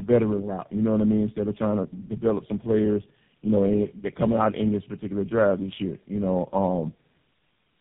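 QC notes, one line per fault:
Throughout, tandem speech coding: the speech sounds like it has passed through three low-rate speech coders in a row, plausibly GSM full rate, then a lower-rate AMR-NB stage, then GSM again, with plain telephone-band links in between. Each coder re-approximates the previous coder's errors instead of the original, so the damage compounds. The result is roughness, a warbly, smeared texture, and a muffled sound with nothing above 3.8 kHz.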